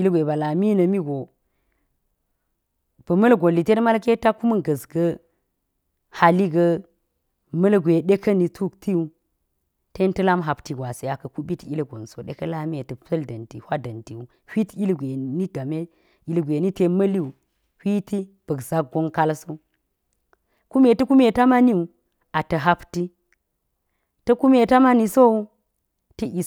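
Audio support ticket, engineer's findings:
Listened through the full speech recording; nothing stood out on listening, no findings to log.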